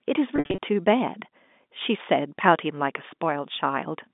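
From 0.36 to 0.58 s, packet loss with pitch repetition removes about 180 ms of speech in scattered gaps, the longest 60 ms. The receiver loops the last pitch period, giving a buzzy, held sound: identical fading cycles on the waveform, flat harmonic streaks on a spectrogram.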